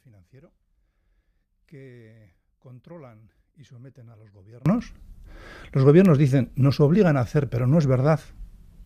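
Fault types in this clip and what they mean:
One channel inverted: one stereo channel likely has reversed polarity, so shared content cancels and the sound drops about 26 dB from 0 to 4.66 s.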